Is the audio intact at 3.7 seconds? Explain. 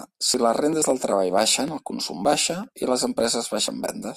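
No. At 3.68 s the speech skips forward abruptly, with about 20 ms missing and the two sides butted together without any gap. This is likely audio missing between chunks: a tiny piece is dropped while one half-second processing chunk closes and the next opens.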